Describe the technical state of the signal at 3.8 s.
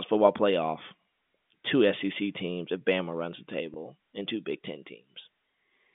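Packet loss with pitch repetition sits just before that point, from 3.74 to 3.76 s, between "runs the" and "and two". About 20 ms of audio went missing, which fits a single lost packet. The receiver covered the hole by repeating the last pitch period, so the gap is heard as a brief held, slightly buzzy tone rather than the silence or click of a plain dropout. The G.711 telephone band carries straight through the repair.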